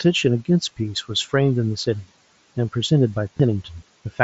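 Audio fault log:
1.23 s and 3.37 to 3.40 s, concealed Bluetooth headset packet loss: Two short gaps of about 15 ms and 22.5 ms, which fits two and then three lost 7.5 ms headset packets. The phone filled each gap by repeating the best-matching stretch of the preceding waveform. Each holds a brief buzzy tone at full level. A slight warble follows as real audio resumes.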